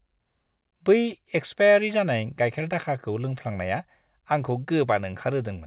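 No faults heard in the speech; the call path behaves as expected, with nothing above 4 kHz, which fits narrowband G.711 mu-law telephony.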